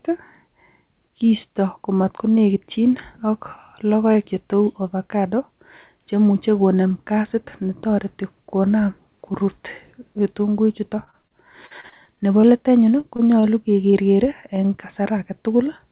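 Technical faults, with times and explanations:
11.04–12.53 s, repeated packet loss (robotic sound): right after "netoreti konam korut ketunguikchuto", twelve gaps, the longest 41 ms, are patched by extending earlier sound. About a fifth of this stretch is filled in, so the speech turns choppy and robotic.
13.01, 13.16 and 13.91 s, short concealed packet loss: each time about 20 ms of speech never arrives. The receiver continues the previous sound to cover it, leaving a brief smear or wobble.
13.40–13.45 s, short stall from a late packet: a packet arrives late and the jitter buffer runs dry. About 23 ms of sound is held over until it arrives, giving a slight drawn-out buzz with nothing lost.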